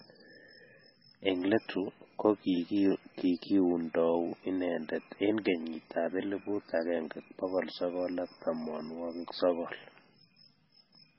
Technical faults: MP3 compression

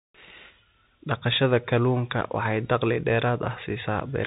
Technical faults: Bluetooth CVSD headset codec

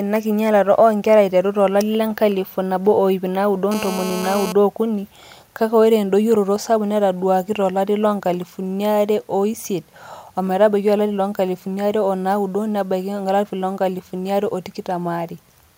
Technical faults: GSM phone buzz

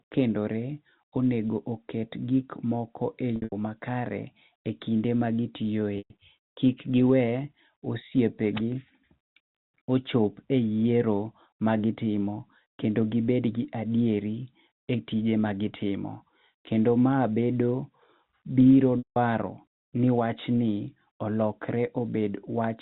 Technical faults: packet loss with pitch repetition

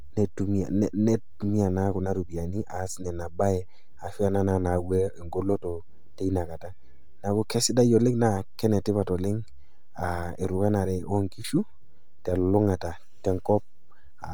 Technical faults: DC offset; Bluetooth LC3 compression

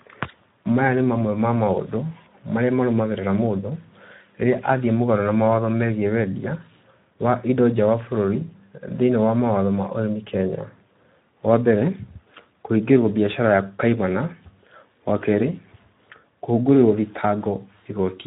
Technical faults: Speex codec

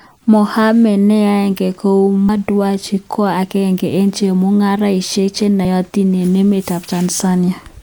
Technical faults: damaged data in a compressed stream

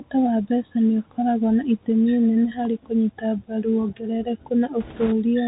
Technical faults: Bluetooth CVSD headset codec; bit errors on a Bluetooth voice link

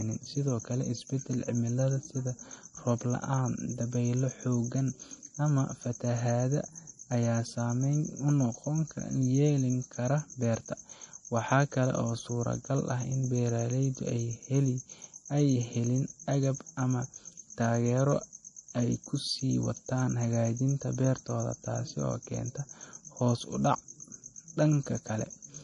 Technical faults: MP3 compression

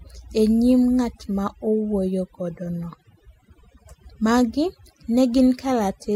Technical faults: overdone noise removal

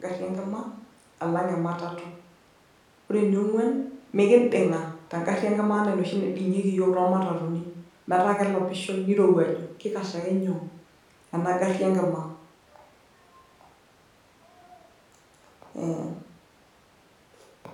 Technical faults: none

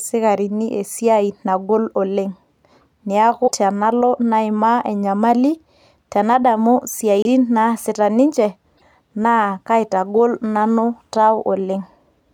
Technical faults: broken MP3 bit reservoir

